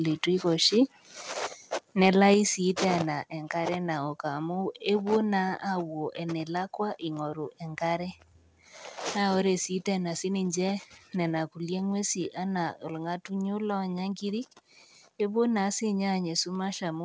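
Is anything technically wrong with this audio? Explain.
Yes. Between 2.02 and 2.24 s, just before "sii tena enkare naok", there is microphone overload. The input was likely set so high that the loudest peaks pushed about 2 dB past the converter's ceiling, so their tops were sliced flat. Fewer than one percent of samples are affected, but those syllables gain a harsh, crackly edge. On a waveform the peaks appear as flat plateaus. On a spectrogram, vertical smears of added harmonics rise toward the 8 kHz limit of the call band.

At 2.34 s, still before "sii tena enkare naok", the microphone volume steps down. The call software likely reacted to the clipped peak by cutting the device's input gain in one jump of about 4 dB. Voice and background noise drop together at that instant instead of fading. On the waveform the envelope shrinks abruptly at that point. On the spectrogram the whole band, including the noise floor between phrases, becomes slightly darker from there onward.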